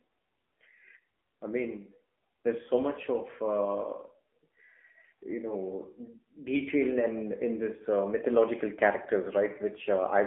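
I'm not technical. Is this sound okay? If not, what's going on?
No. From start to finish the speech has gone through an AMR narrowband mobile codec, the compression used for ordinary 2G and 3G phone calls. It keeps only the middle of the voice, roughly 250 Hz to 3.4 kHz, so the speech sounds thin and boxy, and the low squeeze on data makes it plainly buzzy and robotic. A simple telephone-style filter would only sound narrow. This also sounds synthetic and grainy.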